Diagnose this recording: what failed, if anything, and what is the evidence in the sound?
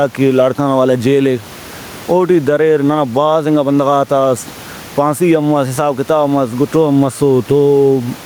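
Gain pumping runs throughout the speech. The gain swings by around 10 dB, and the room noise sits about 31 dB below speech. The likely cause is input gain set far too high, with a fast limiter clamping each peak. Unlike a noise gate, a limiter does not cut the background off.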